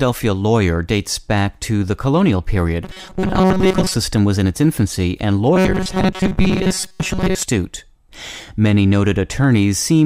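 Speech clip with robotic sound from repeated short buffers at 2.84–3.94 s, after "to the colonial period", and again at 5.54–7.43 s, after "in its infancy and". In both spans the sound turns into a fixed 188 Hz metallic buzz, likely from a roughly 5 ms buffer being replayed while most of the real audio is skipped.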